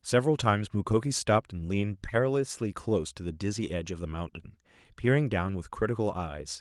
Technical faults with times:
none

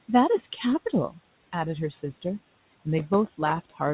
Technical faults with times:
2.98-3.94 processor overload crackle

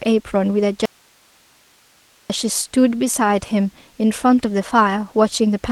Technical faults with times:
0.85-2.30 audio dropout to a faint residue

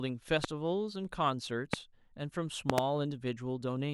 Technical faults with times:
0.44-0.46 loud pop
1.73-1.76 loud pop
2.70-2.80 loud pop

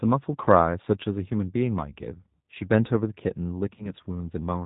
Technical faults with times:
0.00-4.66 G.729 codec
3.76-3.89 VoIP packet loss concealed by the speech codec

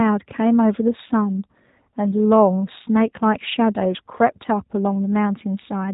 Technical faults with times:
0.00-5.93 G.729 codec

